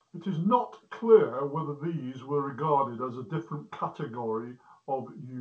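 No technical faults occur anywhere in this speech, which arrives over a call path whose wideband codec leaves nothing above 8 kHz, consistent with G.722.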